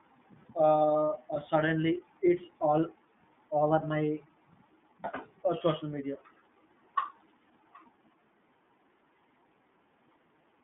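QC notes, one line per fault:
throughout, iLBC codec: the speech is held to a band of 150 Hz to 3.6 kHz, with a plainly audible rough, synthetic grain. Each frame's excitation is coded independently, which fits 30 ms frames at 13.33 kbps. A plain band-limiting filter would sound smooth instead.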